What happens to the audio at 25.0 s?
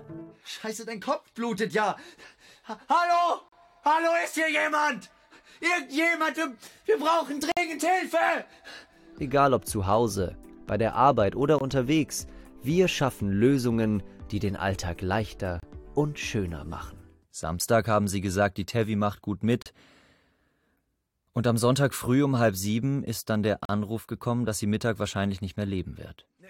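Nothing goes wrong at 25.0 s; the audio plays through that moment intact, with no dropout, click, distortion or other audible fault.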